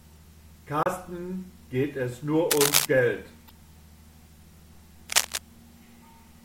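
At 0.83 to 0.87 s and again at 3.48 to 3.51 s, damaged data in the compressed stream makes the decoder lose frame sync, giving a brief chirp, squawk, click or short hole; a spectrogram shows a short vertical smear and the waveform a discontinuity. From 2.51 to 2.85 s and 5.10 to 5.38 s, cable scratch noise, likely from a worn connector being moved, adds rustling bursts roughly as loud as the speech, visible as ragged broadband speckle and spiky waveform fuzz.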